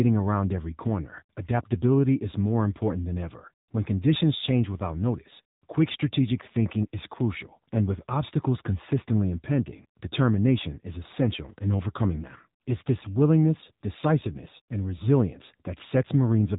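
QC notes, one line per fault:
Throughout, AMR narrowband mobile codec: nothing passes above 3.8 kHz, and the speech has a plainly audible buzzy, synthetic edge from pulse-driven vocal-tract modelling, which fits a low mode near 7.4 kbps. A plain band-limiting filter would remove the highs without adding that buzz.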